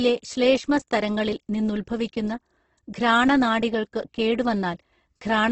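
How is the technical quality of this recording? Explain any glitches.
Quality is poor throughout, with heavy coding damage. Across the whole clip the sound is rough, grainy and noisy, with nothing above 8.2 kHz. It is likely Opus compression: its music mode fills starved bands with folded or noise content, fitting roughly 12 kbps.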